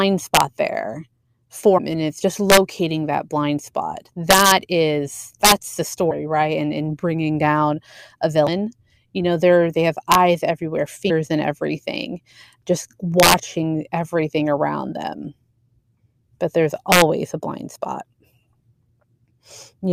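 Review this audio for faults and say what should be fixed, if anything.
Integer overflow cracks the speech peaks at 0.35–0.41, 2.50–2.57, 4.31–4.52, 5.45–5.52, 10.12–10.15, 13.20–13.34 and 16.92–17.02 s. Peaks pushed about 1 to 7 dB past full scale wrap to the opposite sign instead of limiting. Fix this by using saturating arithmetic or a limiter ahead of the integer conversion.

Damaged data in a compressed stream produces short blips at 1.77–1.79 s before "and it's just", 6.10 s before "right and in bringing", 8.47 s after "in bringing down a", and 11.09 s. At each point the decoder misreads corrupt frames and resynchronises. Fix this by re-fetching or re-encoding the file from an intact source and checking stream integrity in transit.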